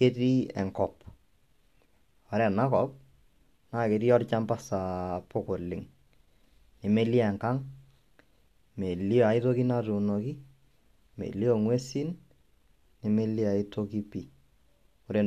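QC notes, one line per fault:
No technical faults are heard anywhere in the speech recording. There is nothing here to flag for correction.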